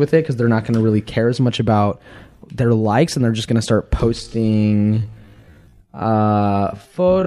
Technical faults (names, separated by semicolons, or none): time-stretched section